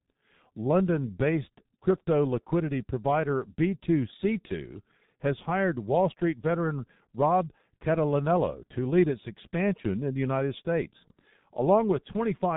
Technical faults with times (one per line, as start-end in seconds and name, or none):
0.00-12.56 G.723.1 codec